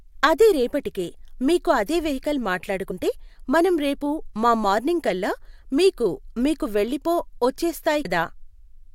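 At 2.9 s, just after "రేపటికే మీకు అదే వెహికల్", the speech lurches forward. Around 40 ms of audio is gone. The same happens at 8.04 s, where about 100 ms is skipped. These are compressed frames skipped: whole frames were missing or rejected by the decoder, a couple at the first point and a handful at the second, consistent with frames of about 21 ms.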